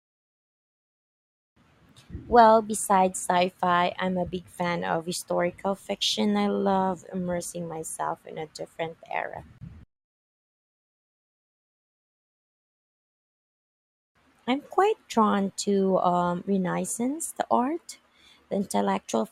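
At about 9.58 s, right after "in a different era", the speech drops out for roughly 30 ms, until 9.61 s. That's a gap at a join of encoded pieces: two chunks were encoded separately and then butted together untrimmed, so the encoder's leading silence and the padded final frame both stayed in. You hear a quick hole with smeared edges, and then the voice picks up exactly where it left off.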